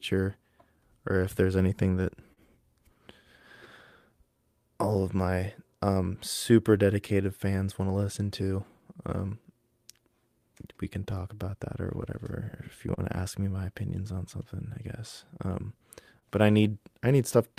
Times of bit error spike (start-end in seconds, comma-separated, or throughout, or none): none